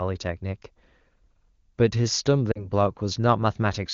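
Speech coded as AMR wideband (HD Voice) has lost AMR speech frames between 2.51 and 2.70 s. About 40 ms of data is missing, which fits two 20 ms frames failing their checks. The decoder briefly extends the preceding sound with decaying gain, giving a short dip to near silence before the voice returns weak or rough for a moment.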